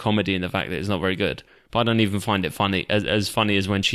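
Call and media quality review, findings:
No faults found in playback.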